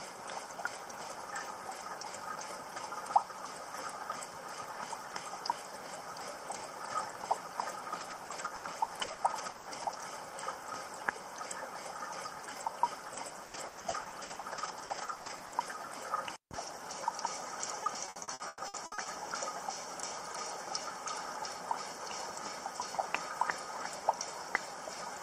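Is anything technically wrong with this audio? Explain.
Yes. Repeated packet loss (robotic sound) occurs at 7.99–9.94 s, 13.08–15.54 s and 17.84–19.08 s. Rapid dropouts are patched by extending the previous sound, producing choppy, robotic audio with pieces missing.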